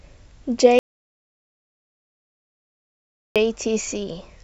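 At 0.79 s the input was likely lost, through a dropped connection or mute, while recording continued writing silence. This is an audio dropout to silence: the speech cuts off abruptly, leaving silence with no room tone for about 2.57 s until it resumes at 3.36 s.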